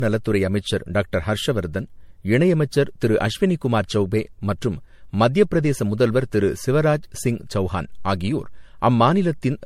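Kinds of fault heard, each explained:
Generation loss: the speech sounds swirly, hollow and smeared, with blurred consonant attacks, likely from repeated lossy re-encoding, about five passes of something resembling 64 kbit/s MP3. A spectrogram shows nothing above 16.5 kHz and patchy holes; waveform transients look rounded.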